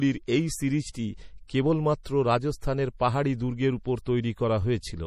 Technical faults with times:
0.00-5.07 MP3 compression

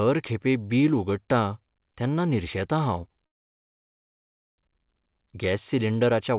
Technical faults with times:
3.26-4.61 call audio freeze

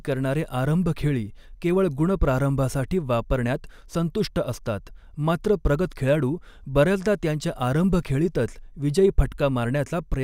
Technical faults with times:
none

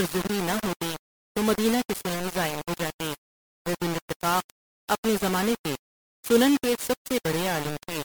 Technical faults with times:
0.00-8.04 low bit depth without dither
0.00-8.04 generation loss

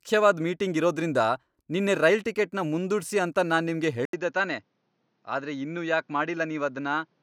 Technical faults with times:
4.05-7.22 input switched to a poorer device

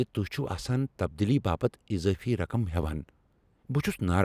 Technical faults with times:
none

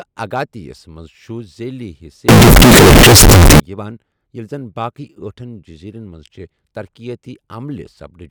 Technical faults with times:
2.29-3.60 signed and unsigned mixed up

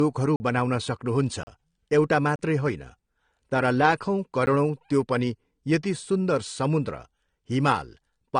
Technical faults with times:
0.00-8.39 low-bitrate audio saved at a high bitrate
0.36-0.40 block of digital silence
1.43-1.47 block of digital silence
2.36-2.39 block of digital silence
4.46 block of digital silence

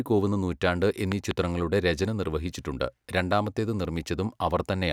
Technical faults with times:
1.12-1.33 loud pop
3.32-3.34 loud pop

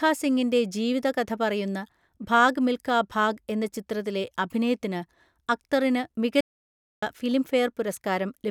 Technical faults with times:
6.40-7.03 playback stall

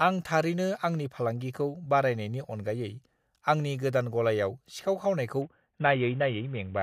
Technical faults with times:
5.42-6.83 Bluetooth SBC bit pool drop

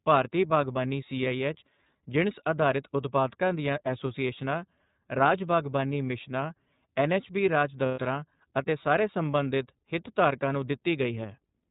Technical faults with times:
0.00-11.70 iLBC codec
7.86-8.00 lost iLBC frames

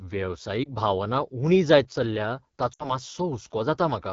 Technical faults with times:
0.00-4.13 AMR wideband (HD Voice) codec
0.63-0.68 lost AMR speech frames
2.73-2.95 lost AMR speech frames

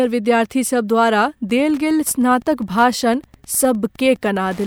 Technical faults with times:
1.48-4.67 Wi-Fi interference

